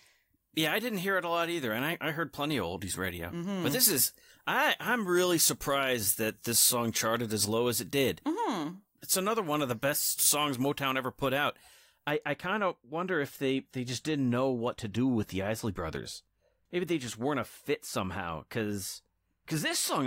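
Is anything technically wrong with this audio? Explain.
Yes. From 0 to 12.1 s, up to "I kind of wonder", the speech has pre-emphasis left on: a treble boost, consistent with the 75-microsecond FM curve, was never undone, lifting 10 kHz about 14 dB over 1 kHz. The voice sounds thin and hissy, with harsh sibilants. A spectrogram shows unusually dense energy above several kHz, and the waveform looks spikier.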